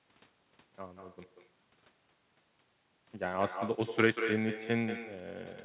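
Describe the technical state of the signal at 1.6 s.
At 1.6 s the signal carries an echo with no canceller, a fault present across the whole clip rather than one confined to this moment. The far end's loudspeaker output is being picked up by its microphone and returned unprocessed, so the speech is trailed roughly a fifth of a second later by a copy about 9 dB down, sounding thinner. The narrow telephone band, with nothing above 4 kHz, comes from the G.711 call path.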